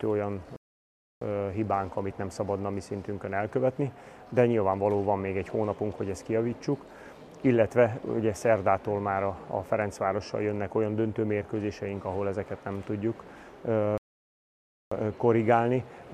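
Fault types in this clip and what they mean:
Playback stall: the player likely ran short of data or had its thread held up, so output fell silent until it recovered. The sound halts mid-flow for 0.65 s at 0.56 s and again for 0.94 s at 13.98 s, then carries on.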